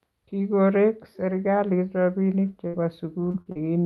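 From 2.09 s to 3.67 s, the speech suffers repeated packet loss (robotic sound). Audio packets went missing four times across this stretch, the longest hole lasting 58 ms and about 160 ms lost in total. The receiver covered each hole by stretching the last sound it had, rebuilding about a fifth of a second. The speech turns choppy, with small pieces dropping out, all within a call-codec path whose top end stops around 12 kHz.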